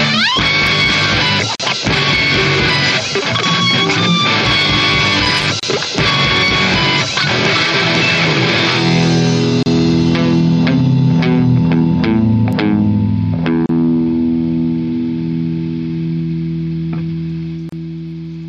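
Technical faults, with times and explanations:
0.67 s, 3.80 s and 12.53 s: bit error spike. A single bit flipped in memory or on a digital link, corrupting a very short run of samples (two, three and one, judging by the width of each tick). Each corrupted value leaps by a power of two and snaps straight back. Because the jump bears no relation to the waveform, each one is heard as an isolated sharp tick with energy across the whole spectrum, sitting on top of the sound rather than within it.
1.55 to 1.60 s, 5.60 to 5.63 s, 9.63 to 9.66 s, 13.66 to 13.69 s, 17.69 to 17.72 s: gap at a join of encoded pieces. The audio was encoded in separate pieces about 4 s long and then joined without trimming, so each join keeps the encoder's start-up delay and the padded final frame. A brief hole opens at every join, about 42 ms at the first and 32 ms at the rest. Its edges are smeared by the codec, and the sound resumes exactly where it stopped.
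5.25 to 5.48 s: loose connector crackle. A worn or dirty contact in the signal path made and broke rapidly, chopping the signal on and off many times within about a fifth of a second. The result is an irregular scratchy burst of crackle rather than a clean dropout, and it ends just before the 5.60 s join gap.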